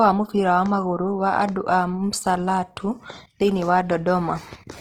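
Throughout the speech, the signal has likely passed through Opus compression in its CELT music mode, at a rate that fits roughly 16 kbps. Starved of bits, the encoder fills bands with folded or noise-like content, so the speech sounds plainly grainy and rough, though it still reaches up to about 20.1 kHz.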